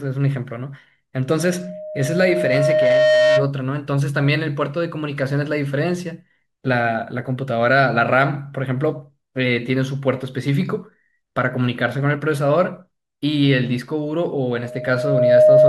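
From 1.37 to 3.52 s, a microphone is picking up the loudspeaker it feeds, and around 616 Hz the loop gain climbs past one, causing loudspeaker feedback squeal. That single frequency reinforces itself on every pass, so a pure tone rises out of the speech, swelling over about two seconds into a steady squeal that ends up roughly 5 dB louder than the speech itself before it stops.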